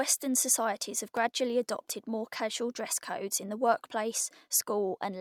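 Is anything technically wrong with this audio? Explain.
Yes. A loud pop occurs from 1.17 to 1.19 s, between "societies have" and "adopted more casual dress". It is likely a voltage spike from a plug, switch or static discharge, heard as one sharp pop about 5 dB above the speech, which continues underneath.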